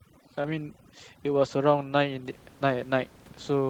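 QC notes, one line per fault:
0.00–2.25 s, overdone noise removal: the denoiser is set far too hard, clamping individual frequency bands whenever they sit near its noise estimate. The room noise, about 25 dB under the speech, drops and breaks up into twinkly specks.
0.41–0.46 s, short concealed packet loss: roughly 20 ms of audio never reached the decoder, so the receiver extended the previous sound for about 26 ms and blended back in. You hear it as a quick smear or wobble, and a short consonant may vanish.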